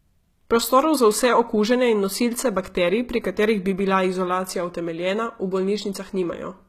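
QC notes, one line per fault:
Throughout: HE-AAC compression, likely, near 20 kbps; treble is rebuilt from copied lower bands, so sibilants sound gritty and metallic, with nothing above 14.9 kHz.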